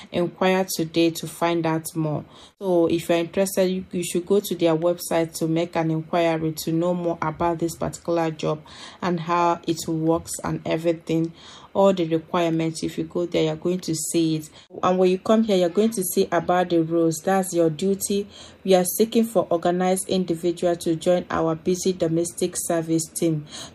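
A 50 Hz buzz runs through the whole audio wherever there is signal, the mark of a resampler restarted on every block: each 20 ms block was converted separately, consistent with 44.1 kHz to 48 kHz conversion.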